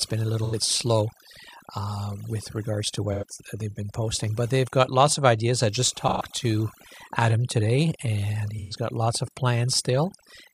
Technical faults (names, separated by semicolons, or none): overdone noise removal; AAC frame loss with concealment